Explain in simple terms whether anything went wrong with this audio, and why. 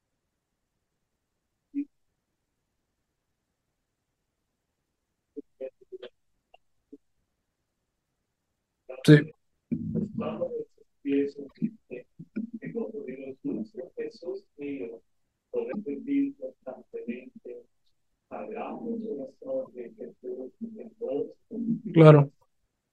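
Damaged data in a compressed stream causes brief glitches at 9.28–9.32, 11.46–11.52, 15.69–15.75, 19.65–19.68 and 22.38–22.43 s. Unlike silent dropouts, the player misreads corrupted chunks and searches for the next good one.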